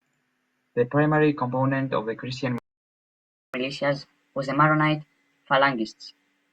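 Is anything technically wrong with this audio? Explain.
Yes, the speech cuts out and then runs fast.

Playback stall, 2.58 to 3.54 s: the output goes silent for about 954 ms, likely because the player ran out of buffered data or its audio thread was blocked. The speech halts mid-flow, then resumes from where it stopped.

Catch-up at higher speed, 3.54 s to the end: the player works through its accumulated backlog by resampling at 1.15 times normal speed. The speech sounds hurried and raised by roughly two semitones, giving a slightly chipmunk quality until the clip ends.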